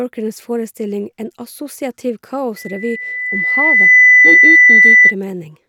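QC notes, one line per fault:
2.56–5.15 s, loudspeaker feedback squeal: a steady 2 kHz tone swells over about one and a half seconds to roughly 15 dB above the speech. The microphone is re-amplifying its own loudspeaker, with loop gain above unity at that frequency, so the tone keeps reinforcing itself.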